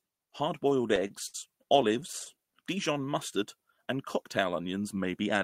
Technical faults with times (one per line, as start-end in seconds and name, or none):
0.69-2.35 repeated stalls (stutter)
2.93-3.13 jitter buffer slow-down